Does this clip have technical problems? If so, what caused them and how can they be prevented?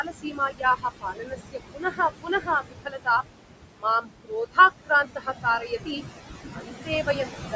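Yes. Noise suppressor artifacts run through the whole clip. The background noise, sitting only about 7 dB below the speech, is pushed down by about 19 dB in the gaps and rises again under each phrase. On a spectrogram the noise floor looks patchy and speckled, with isolated time-frequency cells flickering on and off instead of an even wash. Reducing noise at the source, or using a gentler suppression setting, prevents this.

Speech cut by the noise suppressor occurs at 0.03–0.85 s, 1.01–1.35 s, 1.52–3.23 s, 3.76–3.85 s, 4.01–4.58 s, 4.85–6.02 s and 6.53–7.54 s. Within each span, parts totalling from a tenth of a second to under a second are dropped by about 18 to 22 dB. The suppressor mistook parts of the speech for noise, so they sound swallowed. The waveform shows sudden dips inside words, and the spectrogram shows missing speech energy. Lowering suppression strength, or moving the microphone closer so speech stands well above the noise, prevents this.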